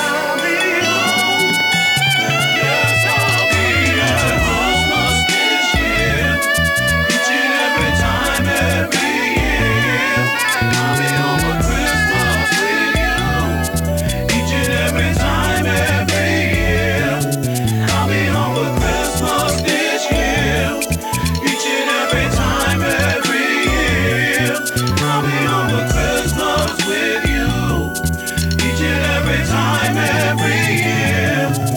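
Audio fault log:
throughout, low bit depth with noise shaping: a steady, thin hiss sits under the whole sound, climbing sharply toward the top of the band so it reads as a bright fizz rather than a broad rush. It stays roughly 20 dB below the signal. The grain fits an 8-bit word length, where each sample is rounded coarsely and the rounding error is fed back to push it away from the low and middle range into the highest frequencies.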